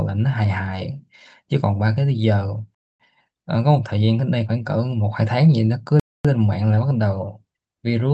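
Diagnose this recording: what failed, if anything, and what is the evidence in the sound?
The playback or storage stage left a gap between chunks. Instead of joining each 3-second chunk to the next, it inserted silence. 250 ms holes interrupt the speech at 2.75–3.00 s and 6.00–6.25 s, with the call codec's 8 kHz ceiling present throughout.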